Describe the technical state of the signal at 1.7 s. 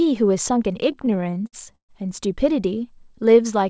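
At 1.7 s the speech drags and stutters. Sound is held over and smeared in short repeats, with the longer holds fading, inside a stretch of repeated stalls (stutter) from 0.92 to 1.91 s. Packets reached the jitter buffer late, so it ran dry 14 times. Each time the receiver stretched the last sound to cover the wait, up to 131 ms at most. These fills make up about a third of that span, yet nothing is lost. The band stops at 8 kHz, as the call path's G.722 coding does.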